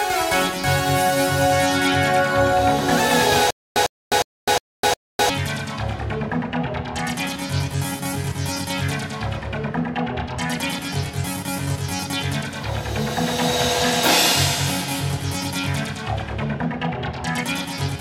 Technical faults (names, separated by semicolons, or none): stutter with silent gaps